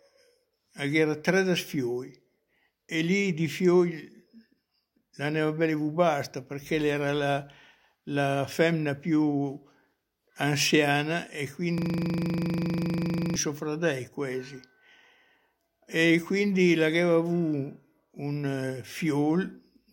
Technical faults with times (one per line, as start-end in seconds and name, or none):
11.78-13.36 system hang loop